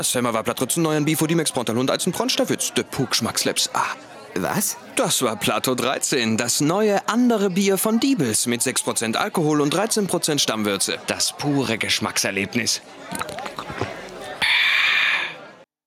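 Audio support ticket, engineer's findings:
No faults found on listening; no dropouts, clicks, distortion or level problems detected. No further action needed on this ticket.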